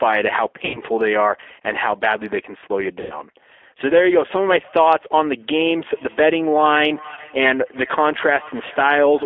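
Throughout, the G.729 codec squeezes the speech into a 300 Hz to 3.5 kHz band and leaves a rough, synthetic grain, which sets it apart from simple band-limiting. This sound fits its 8 kbit/s pulse-based coding. From 0.65 to 0.82 s and from 3.01 to 3.21 s, VoIP packet loss concealed by the speech codec smears the audio into a fading buzzy tone or coloured noise. That points to about 90 ms of lost audio extrapolated by the decoder, which is why it sounds stretched rather than like a silent gap. From 5.37 s to the end, feedback echo between two devices returns each phrase about 0.4 s later, thinner and about 22 dB down. Its fixed repeat interval distinguishes it from room reverberation. At 7.14 to 7.20 s, a shorter concealment blur points to one lost packet, about 30 ms.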